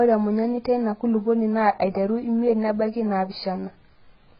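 Across the whole clip the speech is dull, with nothing above 5 kHz, and sibilants and held vowels carry a warbling, fizzy smear. The likely cause is heavy AAC compression at a very low bitrate near 12 kbps. Unlike a plain low-pass filter, it leaves a shifting, metallic texture.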